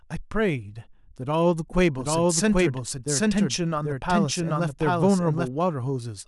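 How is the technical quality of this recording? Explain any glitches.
The recording has one clear fault. From 1.98 to 5.48 s, a doubled audio track appears, likely from a second, slower capture path, so the speech repeats about 0.7 s late at roughly equal loudness, starting and stopping abruptly.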